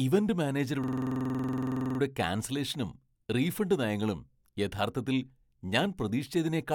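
From 0.84 s to 2.00 s the speech stops moving forward and a single sliver of sound repeats as a fast, rattling stutter at about 21.5 Hz, right up to "ക്യാൻസലേഷനും റീഫണ്ട് നയങ്ങളും യഥാർത്ഥത്തിൽ". This is a system hang loop. The computer or driver stalled while the audio hardware kept replaying the same 46.44 ms ring buffer, which fits a 2048-sample buffer, about 25 times. When playback resumed, essentially nothing had been skipped.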